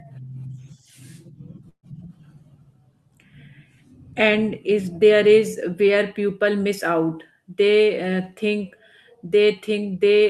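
A short speech clip with one glitch: a burst of packet loss from about 1.69 to 1.85 s. A run of packets never arrived in time, so the receiver papered over the hole by carrying the last bit of sound forward and fading it down, which you hear as a brief smeared, held tail that dies to near-silence for about 80 ms. The speech then picks up again with roughly 140 ms of it simply gone.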